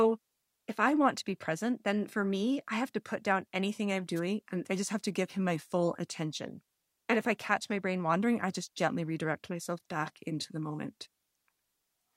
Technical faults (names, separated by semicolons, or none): wireless microphone noise hit